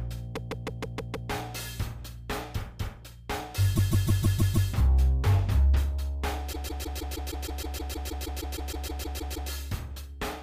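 A short run of compressed frames was sent repeatedly, so a block of about 157 ms loops as a stutter from 0.35 to 1.29 s, 3.75 to 4.69 s and 6.52 to 9.50 s.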